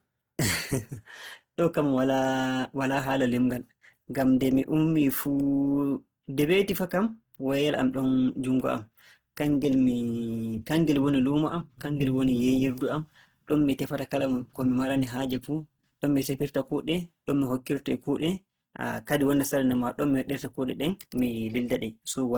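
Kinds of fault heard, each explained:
Opus compression, throughout: the speech sounds grainy and rough, with plainly audible damage, as starved bands are filled with folded or noise-like energy instead of left empty. Content still reaches 20.2 kHz, pointing to Opus music mode near 16 kbps as the likely cause.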